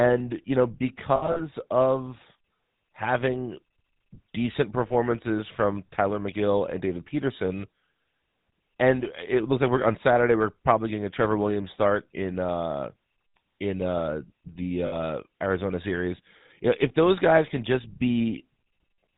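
Throughout, the speech carries the buzzy, gravelly roughness of the GSM full-rate codec, consistent with 13 kbps GSM. The coder rebuilds the voice from a vocal-tract model fed by sparse, regularly spaced pulses. On a spectrogram everything stops sharply at 4 kHz.

From 1.16 to 1.42 s, lost GSM frames total about 120 ms, scattered over 200 ms, the longest gap around 70 ms. Shorter losses follow at 4.88 to 4.91 s (20 ms) and 14.86 to 14.95 s (60 ms). Each gap is filled by repeating the last good frame, so the sound freezes into a rough, metallic ring. The spectrogram shows smeared, unchanging horizontal bands there.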